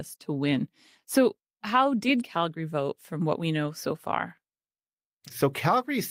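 No technical faults are audible.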